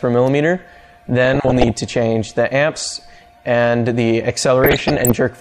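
From 1.25 to 1.71 s and again from 4.64 to 5.12 s, DAB burbling disturbs the audio: bit errors under one percent slip past error correction, corrupting samples so short blips of noise appear in single sub-bands. Unlike dropouts, nothing goes silent.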